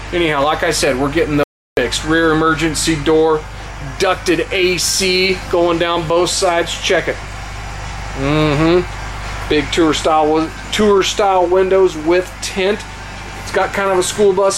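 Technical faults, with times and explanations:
1.43 to 1.77 s, audio dropout to silence: the sound stops abruptly mid-flow and the signal falls to silence for about 0.34 s, with no room tone or noise floor underneath, before returning just as suddenly. A gap this total points to the input itself vanishing while recording carried on, likely a momentary loss of the source or its link, with the recorder writing silence in its place. Whatever sounded during that third of a second is unrecoverable.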